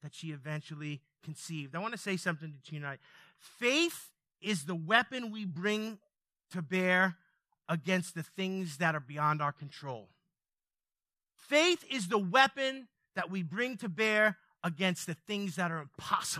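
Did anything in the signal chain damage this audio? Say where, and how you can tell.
No, nothing in this speech recording stood out on listening as damage from any stage of the signal chain.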